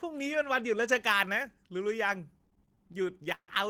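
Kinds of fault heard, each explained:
Pre-emphasis left on: From about 0.88 s to the end, the treble rises along a shelf that fits the CD 50/15 µs curve, so 10 kHz sits about 8 dB above 1 kHz and sibilants turn thin and hissy. The boost was applied and the matching cut never followed. Unlike broadband hiss or a noise floor, nothing is added between sounds. Existing high frequencies are simply lifted along that fixed curve.
Repeated stalls (stutter): Between 2.33 and 3.50 s the audio halts about twenty times. Each time, the last sound is held and stretched, fading during the longer waits, the longest being 133 ms. That adds about 324 ms and takes up roughly 28% of the span. Late-arriving packets kept draining the jitter buffer. Unlike packet loss, nothing is skipped or silenced. The sound drags and stammers, then resumes where it left off.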